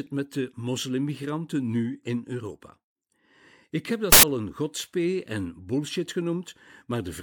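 At 4.12 s the reader starts assembling samples from the wrong bytes, misaligned or in swapped order, so each value's fast-changing low bits land in the most significant position. For about 0.11 s, until 4.23 s, the speech is replaced by a burst of loud, harsh broadband noise built from the signal's own scrambled bytes, before the audio snaps back into alignment just ahead of "een godspee en bullshit".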